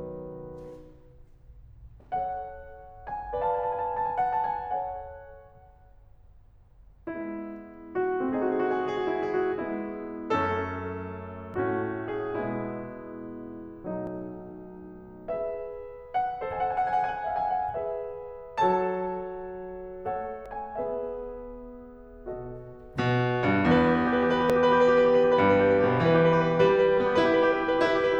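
A sudden jump forward in the music occurs at 11.54, 14.07, 20.46 and 24.50 s, each skipping a few tens of milliseconds with no gap. This is likely a dropped buffer (overrun), where audio was overwritten before being read.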